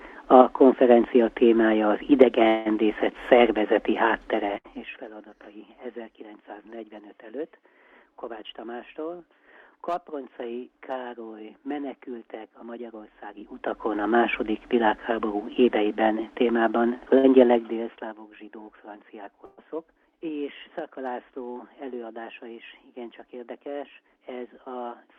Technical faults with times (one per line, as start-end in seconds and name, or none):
2.47-2.68 long network dropout
4.34-5.09 zipper noise
4.57-4.67 burst of packet loss
13.31-14.01 zipper noise
17.18-17.26 burst of packet loss
17.39-18.25 zipper noise
19.45-19.60 burst of packet loss